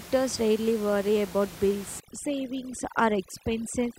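From 2.0 s to the end, overdone noise removal takes hold. Quiet speech is cut away with the room noise. The background drops and breaks up into twinkling specks.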